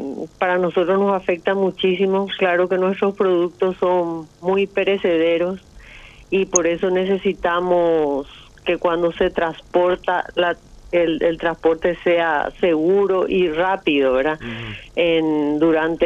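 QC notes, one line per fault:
6.56 s, corrupt frame decoded: a brief loud blip, peaking not far below full scale, where what sounds like one damaged compressed frame was played anyway, throwing energy into the wrong frequencies.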